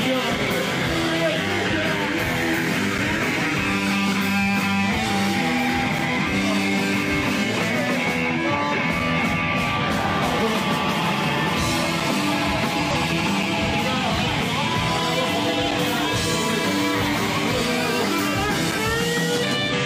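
Gap between chunks at 5.99 s: the audio arrives in 3.0 s chunks, and a 6.5 ms silence at the join leaves a brief hard-edged hole with nothing lost. Damaged data in a compressed stream from 12.91 to 12.96 s: corrupted frames make the decoder lose sync and hunt for the next header, producing a short blip. Gap between chunks again at 13.43 s, the same 6.5 ms hole at a chunk boundary. Damaged data in a compressed stream recurs from 14.23 to 14.28 s, another brief glitch where misread frames are skipped. Gap between chunks at 18.72 s gives one more clean-edged dropout at a join. Damaged data in a compressed stream from 19.69 to 19.74 s ends with a final blip as the decoder resynchronises.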